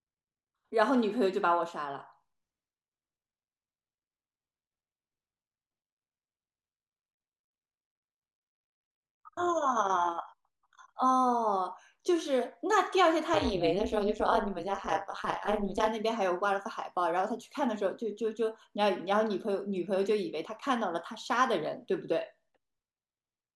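Overlap-add ripple from 13.34 to 15.88 s: mismatched frame overlap makes the level dip by about 60 dB roughly 200 times a second, a harsh robotic buzz over the speech.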